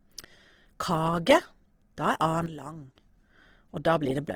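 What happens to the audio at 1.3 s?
At 1.3 s the speech carries the same plainly audible Opus compression damage present throughout the clip: a rough, grainy, noisy texture on the voice, likely from an Opus encoder in its music (CELT) mode at a low rate, which fits roughly 16 kbps. Starved bands are refilled with folded or noise-like content, so the top end stays present up to about 20.4 kHz and swirls less than MP3 does.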